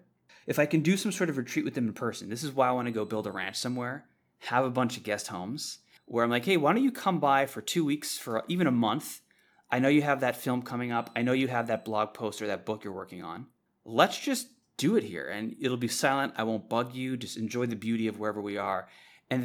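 No technical faults can be heard anywhere in the recording; the signal runs continuously without any interruption or disturbance.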